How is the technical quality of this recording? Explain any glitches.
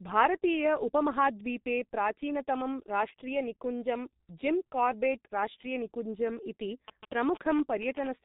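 The recording has two problems: heavy codec damage over the whole clip, and a burst of phone interference near the end.

Across the entire clip the speech is muffled and hoarse, with smeared consonants and no content above 3.8 kHz. This is G.723.1 codec damage. The codec works in coarse 30 ms frames and updates its voice model slowly, and the heavy degradation fits a low rate of roughly 6 kbit/s.

From 6.88 to 8.08 s there is a galloping dit-dit-dit of short 217 Hz buzzes, roughly 10 dB below the speech. These are GSM signalling bursts: a nearby 2G phone exchanging brief radio bursts with the network, which the audio circuitry rectifies into audible clicks and buzz.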